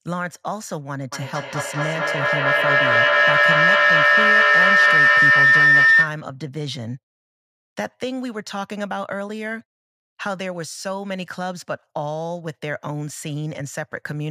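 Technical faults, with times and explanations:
1.12–6.28 s, feedback howl: the microphone-to-loudspeaker loop gains level each trip, building a tone near 2 kHz with repeats about every 200 ms that peaks about 13 dB above the speech.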